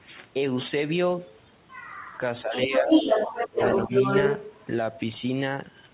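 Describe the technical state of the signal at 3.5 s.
A second voice sits about 5 dB louder than the talker from 2.52 to 4.53 s, which is the other side's voice leaking through, likely loudspeaker echo the canceller left in. Between 3.48 and 3.92 s the talker's own speech drops out in deep dips, about a fifth of a second in all, which is speech suppressed in double talk, likely as the canceller turned down both voices at once.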